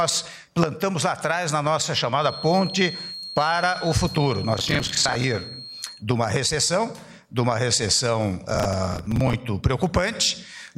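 From 2.16 to 6.05 s a thin whistle at 4.2 kHz sits behind the audio, roughly 15 dB below it. It swells and fades without growing into a howl. This is a feedback whistle, likely from a speaker-to-microphone loop held just short of runaway. Processor overload crackle appears twice, from 4.59 to 5.24 s and from 8.50 to 9.33 s. The first burst overlaps the whistle. Each is a gritty tearing made of many hard-edged repeats of old audio. The spacing fits missed deadlines on buffers of around 10 ms.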